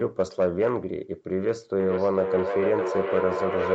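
From 1.8 s, feedback echo between two devices returns speech roughly every half second, only about 3 dB down, showing on the spectrogram as repeated, thinning copies.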